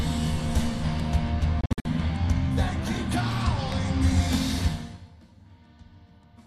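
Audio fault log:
1.61–1.86 s, digital broadcast dropout: the receiver lost frames and muted, fading out in about 3 ms, leaving scattered holes totalling 168 ms over about 240 ms, the longest 48 ms, consistent with roughly seven lost frames.
3.72–3.74 s, loud pop: a sudden voltage step, likely a switch or plug transient, adds one sharp pop roughly 10 dB above the sound, which carries on underneath.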